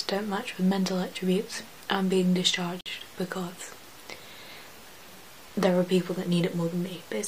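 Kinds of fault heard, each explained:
gap at a join of encoded pieces: untrimmed encoder delay and padding open a 50 ms silence at 2.81 s; the sound resumes where it stopped, unlike a dropout.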